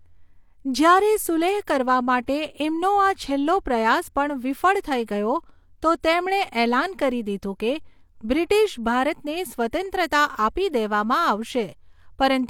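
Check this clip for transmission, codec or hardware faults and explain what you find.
One codec fault stands out. At 2.26 s, a brief hiss smears in just ahead of a sharp onset: pre-echo, where block-wide quantisation noise spills about 15 ms before the attack.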